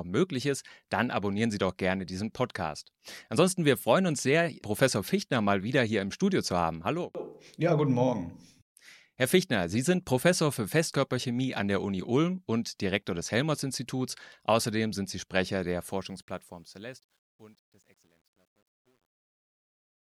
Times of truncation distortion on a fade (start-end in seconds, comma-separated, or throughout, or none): 15.88-20.12